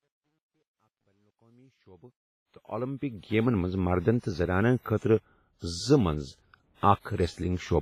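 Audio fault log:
throughout, WMA compression: A transform codec, likely WMA at a low bitrate around 24 kbps, spreads quantisation noise over long blocks and drops weak spectral detail. The result is heavy ringing, washy smearing and hiss that swells and falls with the speech, with nothing above 15.5 kHz.
0.00–3.61 s, truncation distortion on a fade: A digital fade stage keeps too few bits and adds no dither, which fits a 12-bit word. Near the smallest steps, the waveform turns into coarse square steps. The quiet part of the fade sounds gritty, worst from 0.00 to 2.14 s.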